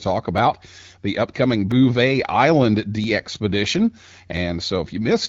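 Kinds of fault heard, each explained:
Clock drift buffer slips: Two devices were likely running on separate clocks differing by around 500 parts per million, so the buffer between them kept creeping toward full or empty until a small block of a few tens of samples was dropped or repeated to catch up. In this speech, which passes through AMR-WB at 12.65 kbit/s, that shows as about four brief clicks spaced evenly every 1.32 s, from 0.38 s to 4.37 s.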